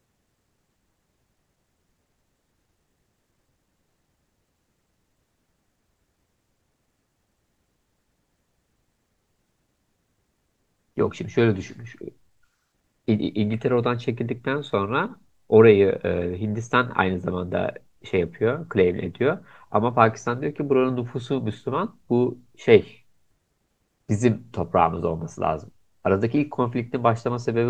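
No dropouts, clipping, glitches or other technical faults turn up anywhere in this recording.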